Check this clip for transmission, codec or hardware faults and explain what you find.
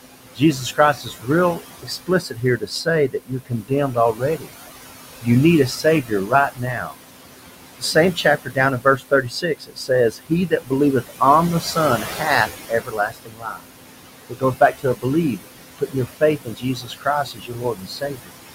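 Both faults come from the noise suppressor. The room noise, about 12 dB below the speech, belongs to the recording and is not a fault.

Noise suppressor artifacts are present throughout. Frame by frame, the suppressor lowers each band it judges to be steady noise by about 17 dB. The background therefore sinks in the pauses and rises again under the speech. Unlike a gate, this pumping acts on separate bands rather than switching the whole signal.

Speech cut by the noise suppressor occurs at 0.36–4.51, 5.83–6.95, 7.79–11.21, 11.61–13.65, 14.29–15.05, 15.37–15.47 and 15.78–18.31 s. The suppressor takes quieter parts of the speech for noise and drops them by up to about 18 dB, so they sound faint or swallowed. This affects roughly a second and a half in the first and last spans and only a brief moment near 15.4 s. Unlike a packet dropout, the sound fades rather than breaking off.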